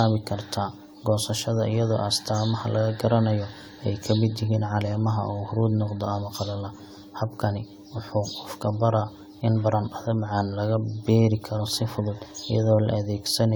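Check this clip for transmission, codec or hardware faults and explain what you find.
One fault runs through the whole speech clip: generation loss. The sound is swirly, hollow and smeared, with blurred attacks and content ending at 20 kHz. The likely cause is around seven repeated lossy passes consistent with AAC-LC near 96 kbit/s, each requantising on a shifted frame grid.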